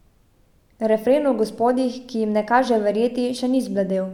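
No technical faults can be heard in the speech.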